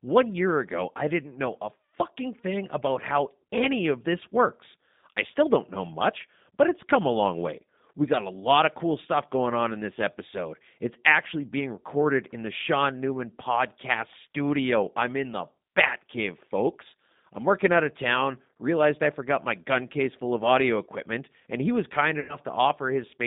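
Throughout, the speech passes through a G.729 codec, which rebuilds it from a vocal tract filter, a pitch predictor and a handful of pulses per frame at what sounds like an 8 kbit/s rate. The line band runs from about 150 Hz to 3.7 kHz, and the modelling leaves speech plainly rough and synthetic.

From 22.20 to 22.37 s, VoIP packet loss concealed by the speech codec occurs. Roughly 90 ms of audio went missing, consistent with three 30 ms packets, and the decoder extended its last pitch and filter settings at falling gain. The gap becomes a stretched buzzy tone or coloured noise that fades, and the speech stays weakened briefly after it.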